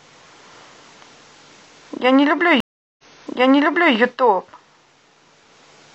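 A stream reconnect runs from 2.60 to 3.96 s. The connection dropped, leaving about 0.38 s of silence, and the player restarted its decoder mid-stream. The server resent buffered data, so the speech resumes 0.98 s earlier, repeating a stretch already heard.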